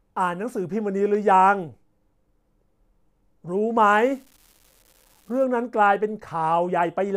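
From 3.87 to 5.44 s the speech carries an unreliable data bit: one marginal data line flips at random, adding identical spikes of about -37 dBFS. It sounds like an even crackle or fizz that persists through pauses, unlike ordinary clicks, which vary in size.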